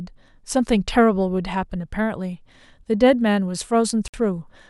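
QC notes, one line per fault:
4.08–4.14 s, gap between stream segments: the time stamps of two consecutive segments fail to meet, which fits a segment boundary at 4 s into the stream, and the player pads the 58 ms hole with silence. The speech stops dead with hard edges on both sides and resumes where it left off, so the sound is delayed rather than cut. The whole clip runs 58 ms longer than the speech itself.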